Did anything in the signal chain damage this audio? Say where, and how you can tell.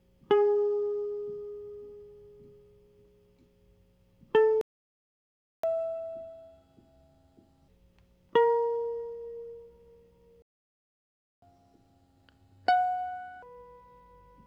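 Yes. The music cuts out at 4.61 s until 5.63 s, and again from 10.42 s to 11.42 s, each a playback stall of about one second. On a waveform these are flat silent gaps; a spectrogram shows full-width blank columns. Because the music resumes where it left off, the break most likely comes from the playback stage: the player's buffer ran dry or its output thread was blocked, so nothing reached the converter.

Each stall is followed by catch-up at higher speed, from 5.63 s to 7.68 s and from 11.42 s to 13.42 s. The player resampled its backlog at 1.5 times normal speed, so tempo quickens and pitch rises by roughly a fifth, about seven semitones, before snapping back. On a spectrogram the harmonics jump upward and spread apart for those two seconds, and on the waveform the musical events appear compressed in time.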